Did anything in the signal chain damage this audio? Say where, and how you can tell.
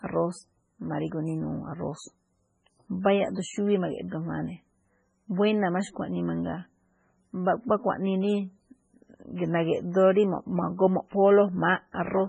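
Yes. At the codec stage, the speech sounds watery and swirly for the whole clip, with nothing above 10.4 kHz. A spectrogram shows a hard ceiling there and flickering holes in the upper bands. This is likely heavy MP3 compression at a bitrate as low as 16 kbps.

Also at the codec stage, there is pre-echo at 3.03 s: a short hiss about 18 ms long leads a sharp onset, which sounds smeared. The quantisation noise from the loud part of the transform block has spread backward. A waveform shows low-level fuzz just before the attack.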